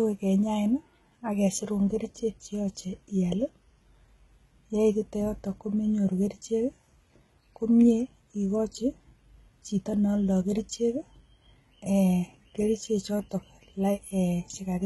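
From start to finish the speech carries heavy HE-AAC compression damage, likely from a very low bitrate, something around 16 kbps. Nothing survives above 11.8 kHz, and the top end is rebuilt from copied lower bands, so the s sounds come out gritty and lispy.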